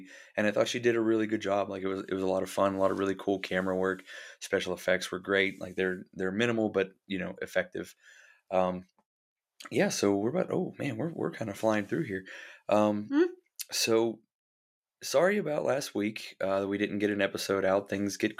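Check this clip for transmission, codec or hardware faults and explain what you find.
Nothing turns up here: the speech comes across steady and intact, with no dropouts, glitches or distortion to point to anywhere along the way.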